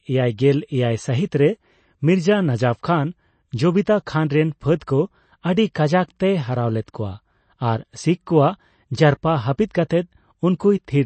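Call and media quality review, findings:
Watery, swirly speech throughout, nothing above 8.3 kHz; likely MP3 compression at a bitrate consistent with about 32 kbps, weak frequency lines dropping in and out between frames.

Pre-echo at 4.06 s: short hiss just ahead of a sharp attack, onset smeared; quantisation noise spread across the transform block into the quiet moment before it.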